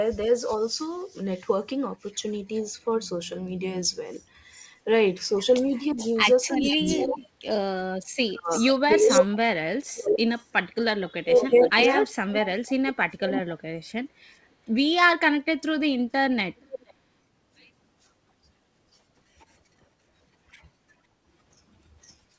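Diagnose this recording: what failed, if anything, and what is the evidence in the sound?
Echo leak at the call-processing stage: a delayed copy of the speech returns from 4.53 to 13.4 s, lagging about 433 ms at roughly 10 dB down, then briefly at 16.57–16.94 s (477 ms, about 15 dB down) and 22.04–22.15 s (507 ms, about 35 dB down). The far end's echo canceller likely let loudspeaker pickup through. On a spectrogram, faint duplicate formant patterns trail the originals by that lag, below the G.722 8 kHz ceiling.

Speech suppressed in double talk, also in call processing: between 5.93 and 13.54 s the talker's level drops in pieces, as deep as about 35 dB, for around 3 s in total. The canceller likely mistook overlapping speech for echo and attenuated both. The waveform shows chunks of envelope carved out, and the spectrogram shows vertical gaps.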